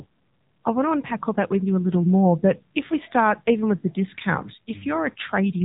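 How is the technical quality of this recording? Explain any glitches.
Quality is limited by one fault present for the whole clip. AMR narrowband mobile codec, throughout: a low-rate vocal-tract model rebuilds the speech, removing everything above 3.8 kHz and leaving a plainly buzzy, synthetic edge consistent with a 7.4 kbps mode.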